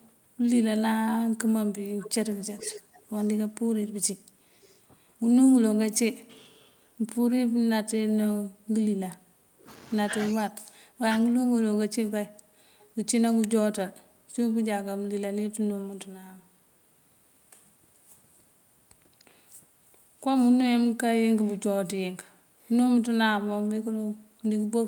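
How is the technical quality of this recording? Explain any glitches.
The recording is speech with two recurring call-path problems: a delayed copy of the speech leaking back, and the talker's level being pulled down in short bursts.

Echo leak appears at 0.02 to 0.06 s, 1.99 to 5.97 s and 12.79 to 12.86 s. A second copy of the speech trails the original by about 382 ms. It is barely audible at the start, faint near 12.8 s, and clearly present through the long stretch from 2 to 6 s. The likely cause is a far-end loudspeaker whose echo canceller let part of its microphone pickup through and sent it back. A consistent, discrete 382 ms offset separates this from room reverberation, which smears into a diffuse tail rather than repeating the speech.

Speech suppressed in double talk occurs at 2.87 to 2.91 s, 6.62 to 6.66 s, 9.11 to 11.24 s and 19.34 to 19.41 s. The talker's level ducks slightly in the brief events, more noticeably near 19.4 s, and deeply across about one and a half seconds between 9.1 and 11.2 s. 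This is likely an echo canceller that could not separate its own talker from loudspeaker echo while both sides spoke, so it turned everything down. Unlike packet-loss dropouts, these are level dips that track the overlap rather than hard gaps of silence.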